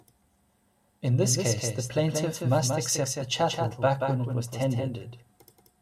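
From the start, a doubled audio track: the speech repeats roughly 200 ms behind itself, about 5 dB quieter and without room colour, likely from a second, slower capture path. From 0.21 s to 5.70 s, clock drift buffer slips give a regular tick every 0.69 s, roughly ten in all, likely a few samples dropped or repeated as mismatched device clocks drift apart.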